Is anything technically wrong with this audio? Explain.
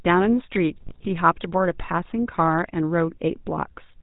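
Yes. The speech carries GSM full-rate codec damage throughout. It plays through a model of the vocal tract driven by sparse, regular pulses, which fits the 13 kbps GSM full-rate codec. Nothing passes above 4 kHz, and the pulse excitation makes the speech sound buzzy and gravelly.

From 0.82 to 1.09 s there are GSM bit errors. Corrupted filter, pitch and gain values warp the sound frame by frame. It breaks into squawks, pops and gargling.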